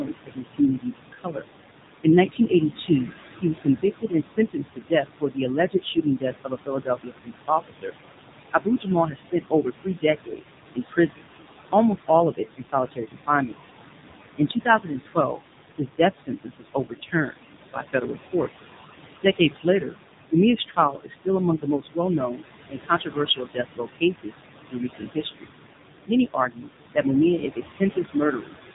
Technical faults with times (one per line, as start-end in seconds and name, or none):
0.00-28.74 noise suppressor artifacts
0.00-28.74 AMR narrowband mobile codec
0.00-1.45 speech cut by the noise suppressor
2.04-13.55 speech cut by the noise suppressor
14.37-25.50 speech cut by the noise suppressor
26.05-28.53 speech cut by the noise suppressor